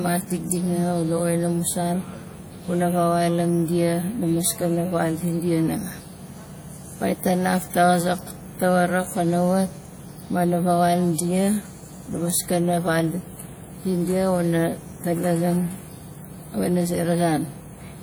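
WMA compression damage runs through the whole of this speech recording, from start to finish, and it is plainly audible. The sound has a ringing, washy quality, with a hiss that swells and fades along with the signal. Nothing is present above 20.1 kHz. The likely cause is a low-bitrate Windows Media Audio encode, with the smearing fitting a 48 kbps encoder whose long transform blocks spread quantisation noise across tens of milliseconds.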